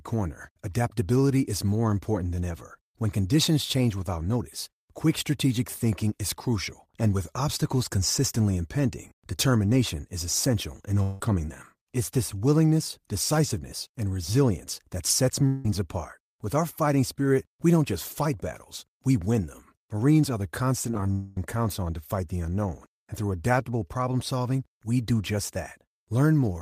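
Long network dropouts at 11.02–11.21 s, 15.47–15.65 s and 21.12–21.37 s interrupt this speech recording; each is likely a network stall, with the last sound stretched into a fading buzz across the roughly 0.17–0.25 s of missing audio before speech resumes. Repeated packet loss (robotic sound) at 20.91–21.06 s produces choppy sound: five short holes, none longer than 15 ms, patched by continuation and covering about a third of that span.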